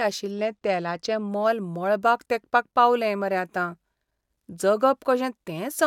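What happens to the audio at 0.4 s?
At 0.4 s the speech is inside a stretch of channel delay, which is comb filtering, running from 0.31 to 1.31 s. One channel lags the other by a tiny fraction of a millisecond. That fits a delay of about two samples. When the channels sum to mono, the shared sound cancels at high frequencies, with the first notch somewhere near 10 kHz. The top end dulls.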